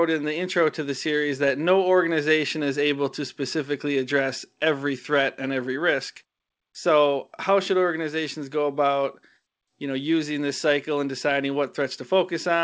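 Nothing stood out on listening to this speech, which comes through a WebRTC call path with its G.722 codec limiting the sound to below 8 kHz.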